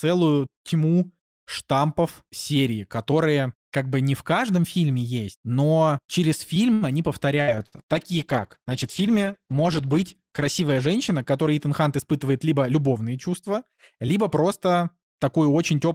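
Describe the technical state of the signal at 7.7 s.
At 7.7 s the signal sits inside a call bitrate drop running from 7.42 to 12.03 s, where the encoder's rate fell from 32 to 13 kbps, bottoming out for about 3.1 s. At the lower rate the coding is coarser and the upper band is stripped, so the speech sounds muffled and watery. On a spectrogram the high frequencies are cut off flat.

At the same moment a burst of packet loss spans 7.66 to 7.75 s. About 60 ms of audio never arrived, and the receiver filled the gap by extending the last sound and fading it. You hear a brief held buzz or hiss before speech resumes further on. The waveform shows a decaying, repetitive stretch, and the spectrogram shows smeared, static bands.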